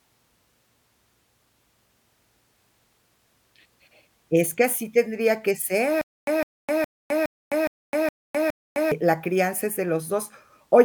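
A speech clip with a stutter with silent gaps from 6.01 to 8.92 s, right after "que así tendría que" and before "la crianza es de". The same 156 ms fragment plays seven times, each followed by about 259 ms of digital silence, so it returns every 415 ms. That steady loop-then-silence rhythm sets it apart from a simple dropout or a gapless repeat. The likely cause is a stalled stream replaying its last buffer, and the audio for that span is lost.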